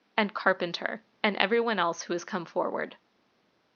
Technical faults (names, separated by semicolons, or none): none